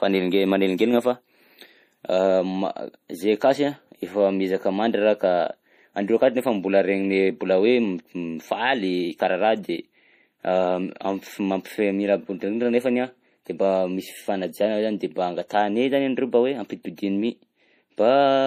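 MP3 compression runs through the whole speech clip. Nothing is present above 15.2 kHz, where the encoder has cut the treble, and the damage is plainly audible: a watery, swirling texture and metallic chirps on s sounds. This is the likely result of an encoder short of bits, pointing to a rate around 40 kbps, zeroing weak frequency lines so they flicker on and off between frames.

Pre-echo occurs from 15.48 to 15.50 s, just after "fifanajana zany de mba" and before "zany andreo". The sharp onset there fell late in a transform block. Quantisation noise sized for the loud attack spread across the whole block, so about 23 ms of hiss fills the quiet moment before the attack, which sounds softened and smeared.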